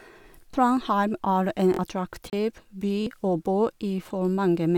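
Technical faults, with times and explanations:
0.51 to 3.07 s, repeated buffer: three stutters, at 0.51 to 0.53 s, 1.74 to 1.79 s and 3.02 to 3.07 s. In each, a piece of about 23 ms, which fits a 1024-sample buffer, plays again with a hard join because fresh audio arrived late. It repeats once at 0.51 s and twice at 1.74 and 3.02 s. The timeline then jumps forward, skipping roughly 20 ms and 50 ms of sound respectively.
2.30 to 2.33 s, Bluetooth dropout: a 29 ms hole of silence. The sound resumes further along, as if it had kept playing, rather than picking up where it stopped. The gap's length fits a couple of wireless packets missing their delivery deadline, so the likely cause is a Bluetooth link dropping packets. This differs from the stutters, where audio is repeated rather than replaced with silence.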